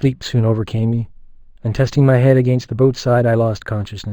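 Speech carrying imaging from linear upsampling from start to finish. Straight-line interpolation dulls the top of the band and leaves a faint mirrored copy around 5.5 to 11 kHz, roughly 30 dB down, pointing to an 11 kHz source raised to 48 kHz. Unlike aliasing, which folds energy downward, the shimmer sits above the original band.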